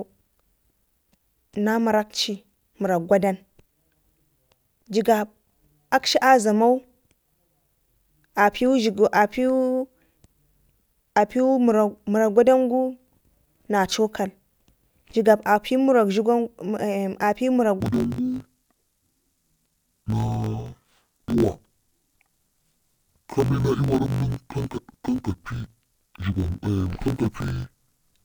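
From 17.80 s to the end of the clip, the speech shows interleaved audio read as planar. Each 20 ms block of alternating left and right samples has been split in half, with the first half sent to the left channel and the second to the right, so each side plays its content at half rate. The speech drops an octave and sounds dull and robotic, with a 50 Hz buzz from the block boundaries.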